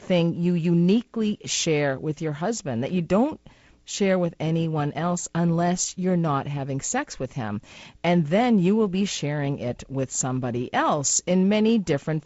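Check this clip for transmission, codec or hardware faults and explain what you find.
Nothing here points to a fault, just speech carried over G.722 wideband telephone coding, with the sound stopping around 7.7 kHz and a little of the light coding roughness you'd expect from a lower-bitrate mode such as 48 kbit/s.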